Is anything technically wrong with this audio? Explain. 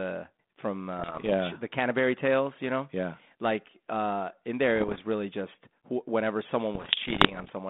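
Yes, there are bit errors on an ADPCM link, in three bursts: 0.98 to 1.32 s, 4.75 to 5.01 s (between "uh in" and "really just"), and 6.74 to 7.50 s. Each flipped bit throws off the decoder's step size and prediction, so you hear pops and rough, level-jumping crackle ringing on briefly. The last burst is densest, around 1 to 2 percent of bits hit. The narrow phone-band sound underneath fits a 32 kbit/s G.726 link.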